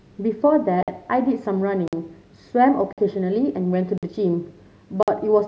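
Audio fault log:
0.83, 1.88, 2.93, 3.98 and 5.03 s, gap between chunks: hard-edged 50 ms holes break the speech once a second, as silence is left at each join between the 1-second chunks.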